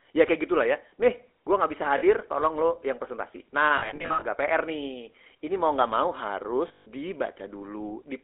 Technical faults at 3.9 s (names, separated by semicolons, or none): GSM full-rate codec; lost GSM frames